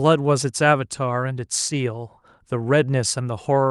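No technical faults can be heard in the speech, which arrives over a call connection whose codec rolls off the top end at around 12 kHz, as is normal for that path.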